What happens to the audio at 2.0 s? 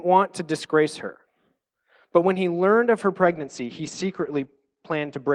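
Nothing goes wrong at 2.0 s; the speech continues intact through that moment, with no dropout, click, distortion or other fault.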